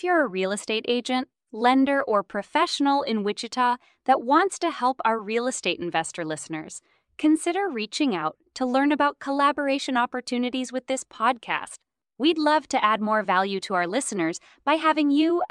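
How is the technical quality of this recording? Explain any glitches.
The technical quality of this recording is good, with no glitches to explain.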